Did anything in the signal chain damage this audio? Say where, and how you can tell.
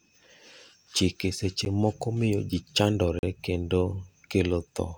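Yes, at the driver or buffer stage: two blocks of digital silence, a 10 ms one at 1.65 s heard as a tick, and a 40 ms hole from 3.19 to 3.23 s. The buffer likely wasn't filled in time, so zeros went out, cutting the sound out and back with no fade.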